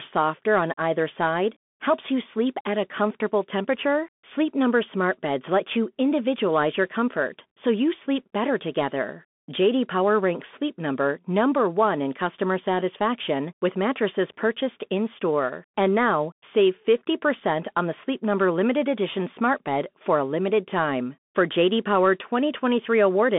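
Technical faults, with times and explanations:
Throughout, Bluetooth CVSD headset codec: the speech is squeezed into a 200 Hz to 3.5 kHz band with nothing above 3.8 kHz, and the 1-bit up/down coding, which fits a 64 kbps stream, can't keep up on sharp sounds, so it gets gritty.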